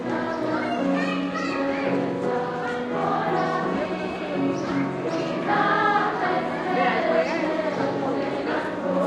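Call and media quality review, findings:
No technical faults found: the sound recording has no audible defects in level, continuity, timing or frequency content anywhere in the clip.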